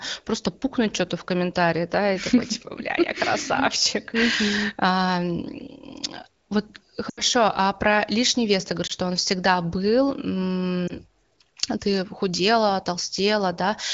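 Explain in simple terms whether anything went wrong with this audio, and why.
Yes, a few lost AMR speech frames: the speech briefly drops to near silence around 7.09 to 7.22 s, with shorter dips at 8.87 to 8.92 s and 10.87 to 10.96 s.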